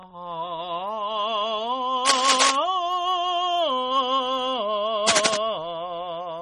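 The whole piece of music has a watery, swirly quality with smeared attacks, likely MP3 compression starved of bits, which fits a very low bitrate around 32 kbps. From 2.05 to 2.56 s and again from 5.06 to 5.37 s, rough scratching bursts about as loud as the music cut across it, likely cable scratch noise from a worn connector being moved.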